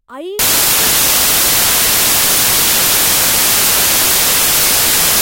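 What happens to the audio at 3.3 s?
At 3.3 s the reader is assembling each sample from the wrong bytes, a fault that runs from 0.39 s to the end of the clip. Because the bytes are misaligned or swapped, the rapidly changing low-order bits land in the most significant position of every value. The speech is replaced by loud, hissing white noise on its louder sounds.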